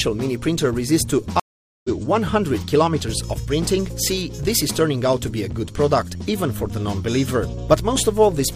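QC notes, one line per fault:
1.40–1.89 s, stream reconnect: the connection dropped and the player rejoined the stream with a fresh decoder, leaving a gap of about 0.45 s. The sound comes back around 0.3 s further on, so a short stretch is skipped, and the restart opens muted or faded in.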